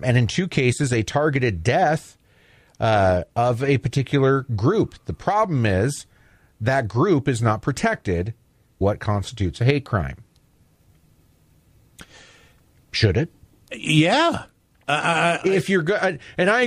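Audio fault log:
8.80 s, stream segment skipped. After "group is not protected" the speech jumps abruptly to "constitutes a hate crime", likely because one stream segment failed to load.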